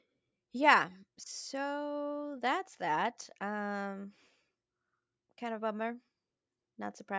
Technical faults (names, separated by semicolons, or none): none